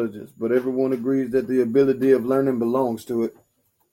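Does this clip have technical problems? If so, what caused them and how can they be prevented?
No, this clip has no technical problems, so there is nothing to prevent.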